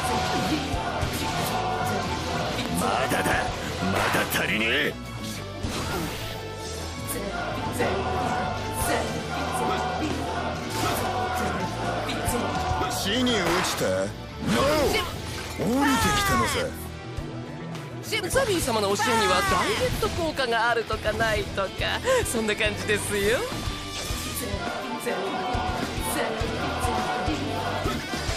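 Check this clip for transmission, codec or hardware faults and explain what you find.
Two loud pops: one from 2.66 to 2.68 s, and a double pop from 12.67 to 12.84 s, each peaking about 10 dB above the audio, which continues underneath. A sudden voltage step, likely from a plug, switch or static discharge, hits the signal path and is heard as a sharp thump.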